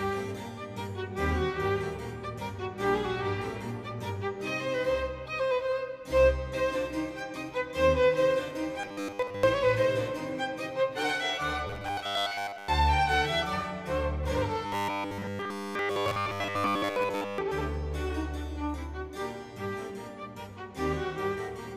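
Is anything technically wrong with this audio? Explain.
Yes: robotic sound from repeated short buffers at 8.80–9.43 s, 11.67–12.68 s and 14.66–17.38 s. A rigid 100 Hz buzz appears, likely from 10 ms segments repeated to cover most of the time. Unlike steady hum, it comes and goes with the sound's contour.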